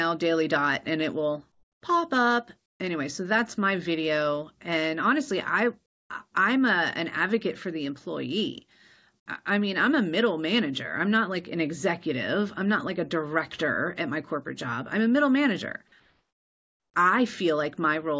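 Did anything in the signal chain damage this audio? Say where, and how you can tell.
Yes, call processing: comfort noise in place of the background at 1.52–1.82, 2.66–2.80, 5.86–6.10 and 16.0–16.94 s. The ambience turns flat and featureless, twice about 20 dB quieter, likely from discontinuous transmission.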